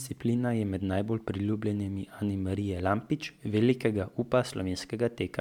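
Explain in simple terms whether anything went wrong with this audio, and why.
Throughout, the speech has generation loss. It sounds swirly, hollow and smeared, with blurred onsets, likely because it was re-saved as MP3 around seven times.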